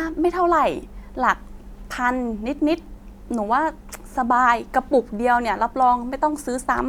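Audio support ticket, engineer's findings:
Speech signal checked over the whole recording with no technical faults found anywhere in the chain.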